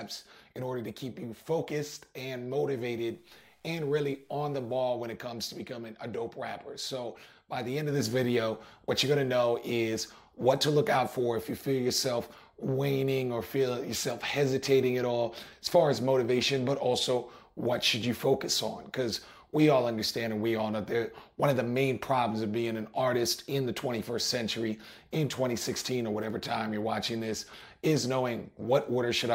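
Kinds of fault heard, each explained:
Low bit depth without dither: the stretch from 3.09 to 4.80 s was likely reduced to a coarse word length and cut off rather than rounded, with no dither to break up the steps, which fits a 10-bit depth. The rounding error tracks the waveform instead of sitting as steady hiss, so the sound turns grainy and gritty, the distortion shifting as the level moves, with error sitting roughly 45 dB under the signal.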